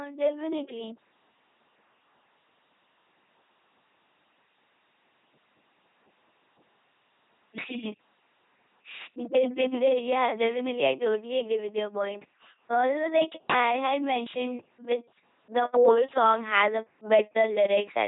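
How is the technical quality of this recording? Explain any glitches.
Technical quality is poor throughout the speech. LPC-10 vocoder, whole clip: each moment is resynthesised as buzz or hiss through a ten-pole filter, giving a robotic, mechanical voice with nothing above 3.8 kHz, consistent with 2.4 kbit/s coding.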